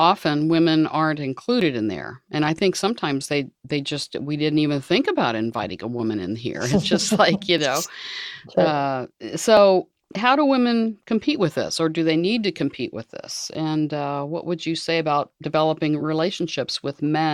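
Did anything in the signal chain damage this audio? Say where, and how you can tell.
Yes. Tiny clicks or skips land at 1.61, 5.59 (after "didn't even think about"), 7.58, 9.57, 13.55 (between "to compete with this" and "uh what would you") and 15.53 s, on a 2-second grid. That is overlap between stream segments: at playback the player trims a few milliseconds where segment timestamps overlap, and the waveform jumps.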